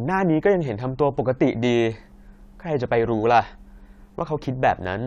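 From 0.00 to 1.58 s, a resampler restarted on every block: each 20 ms edge glitches, making a 50 Hz buzz under the speech and regularly spaced vertical spectrogram lines.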